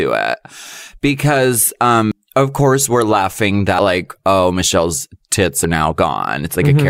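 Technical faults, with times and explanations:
2.12 s, 3.69–3.79 s and 5.55–5.74 s, compressed frames skipped: the decoder never plays whole frames of the coded speech, either because they are missing or because it rejects them as corrupt. The speech jumps ahead by about a third of a second at 2.12 s, just before "of course we're laughing", and by about a tenth of a second after that phrase, leading into "like oh", and again at 5.55 s.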